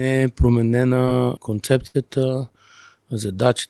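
At 1.05 to 1.09 s the speech shows a short concealed packet loss. About 20 ms of audio never arrived in time, and the receiver covered the hole by extending the preceding sound for roughly 16 ms before crossfading back into the real signal. It comes across as a quick smear or wobble rather than a gap. What separates it from a burst is its brevity.

From 1.87 to 1.96 s comes a burst of packet loss, where about 80 ms went missing in one run. The decoder stretched the last sound across roughly 72 ms while turning it down, so the speech briefly freezes into a held buzz or fading hiss before jumping ahead. That audible freeze, and the sense that a piece of the sentence has been skipped, is what marks it out from the earlier, much shorter concealment.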